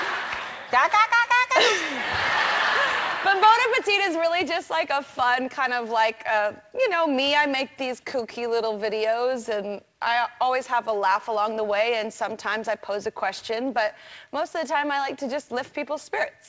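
Nothing here needs flagging: the sound came over a call line in the usual way, with nothing above 8 kHz, which fits a G.722 codec running at 64 kbps, and no faults turn up anywhere along the way.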